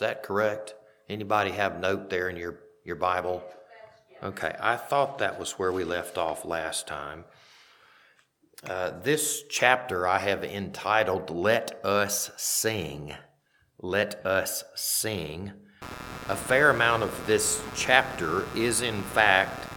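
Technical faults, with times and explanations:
15.82–19.77 s, computer activity noise: a buzzy chirping pulsing near 150 Hz, roughly 10 dB under the sound, as processor or graphics load disturbs the shared audio ground.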